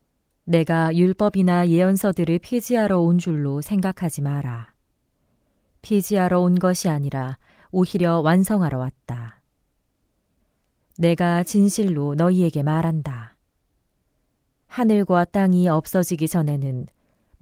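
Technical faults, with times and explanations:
No technical faults are audible in this speech.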